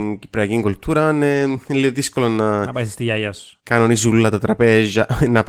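No technical faults turn up in this speech recording. The Opus voice compression is working as intended, keeping the full audio band with only light coding damage, which fits the hybrid mode at around 20 kbps.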